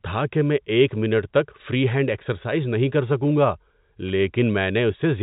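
No technical faults can be heard in this speech recording. It carries the narrow band of G.711 telephone coding, with nothing above about 3.8 kHz and only a faint trace of the coding's low background hiss following the level of the speech.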